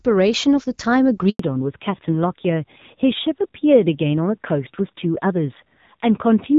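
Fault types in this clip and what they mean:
handover gap: The call was passed from one network to another, and for about 100 ms no speech frames got through while the link switched. At 1.29 s the speech fades out within a few tens of milliseconds and stays silent until the new connection picks up at 1.39 s, so whatever was said in that stretch is simply missing.
fallback to narrowband: Once the handover finished, the call dropped from HD Voice (AMR-WB, whose light coding at the start sounds clear and full) to a narrowband codec, with sound that fits a rate around 7.4 kbit/s. From 1.39 s to the end nothing survives above 4 kHz. The speech loses its airy upper range and sounds duller, more muffled and rougher.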